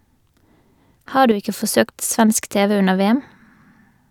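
Speech with an abrupt dip of about 6 dB from 1.31 to 1.42 s, likely because one channel drops out of the stereo pair before the mono sum.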